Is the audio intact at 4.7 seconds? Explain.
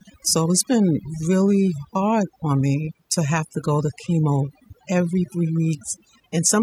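No. Overdone noise removal runs throughout, so 4.7 seconds is affected. Bands near the noise estimate are cut away, leaving warbling, twinkling specks rather than steady hiss or dropouts.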